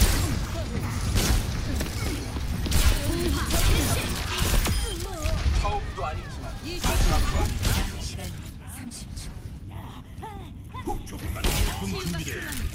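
From 8.3 s to 12.31 s the sound turns coarse and watery, with the top end dulled, and it is roughest for about 2.2 s before clearing. This is a call bitrate drop. The call's bandwidth estimate fell, so the encoder was forced to spend far fewer bits, coding detail crudely and trimming high frequencies. The degradation is consistent with a fall from around 96 kbps to roughly 28 kbps, followed by recovery.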